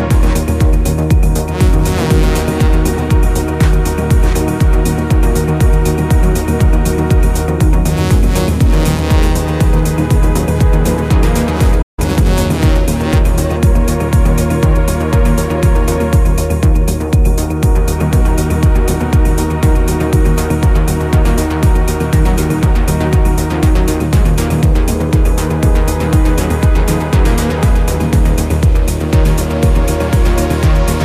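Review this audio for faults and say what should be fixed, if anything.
A playback stall opens the problem at 11.82 s: the player most likely ran dry of buffered data, or its output thread was held up, so nothing reached the output for about 0.16 s, until 11.99 s. The sound simply cuts to silence mid-flow and then resumes. Keeping a deeper playback buffer and running the audio thread at high priority, free of blocking work, would prevent this.

Time-compressed catch-up follows immediately, from 11.99 to 12.29 s. To shed the backlog built up during the stall, the player trims out short slices and cross-fades the remaining pieces together, running at about 1.5 times normal speed while holding pitch steady. The result is a brief hurried stretch. Preventing the stall would remove the need for this, and easing back over a longer window with a smaller speed-up would make any remaining catch-up far less audible.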